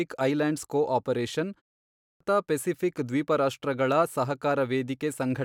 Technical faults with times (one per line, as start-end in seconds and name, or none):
1.92-2.20 clipped start after a pause